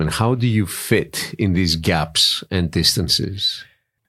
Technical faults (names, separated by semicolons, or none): sudden gain jump